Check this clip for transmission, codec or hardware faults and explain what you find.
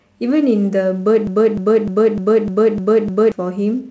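There's one clear fault here, a broken-record loop from 1.27 to 3.32 s. A 302 ms chunk of the speech repeats exactly, seven times back to back. That's likely a stalled player or stream resending its last buffered fragment. Whatever should have played meanwhile is gone.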